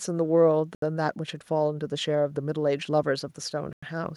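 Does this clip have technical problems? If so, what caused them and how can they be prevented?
Yes. The speech cuts to clean silence twice, for 74 ms at 0.75 s and 97 ms at 3.73 s, then resumes, which points to a likely Bluetooth stall, where interference delayed packets until the headphone buffer emptied. Unlike a glitch, there is no click or garbled fragment. Keeping the phone close to the headphones, with fewer 2.4 GHz sources nearby, prevents it.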